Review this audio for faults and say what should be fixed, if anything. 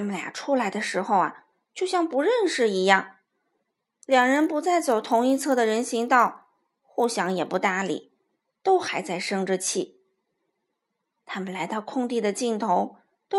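From 4.08 to 7.58 s the resampler restarted on every 20 ms block, leaving edge errors that buzz at 50 Hz, seen as evenly spaced vertical spectrogram lines. Carry the converter's filter history across blocks so each edge is computed from its true neighbouring samples.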